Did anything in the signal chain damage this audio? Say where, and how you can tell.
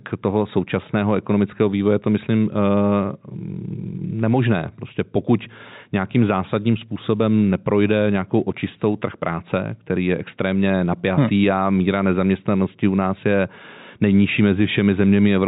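No, the speech has the narrow telephone band of G.711 coding, with nothing above 4 kHz, and nothing in the chain adds audible damage beyond that.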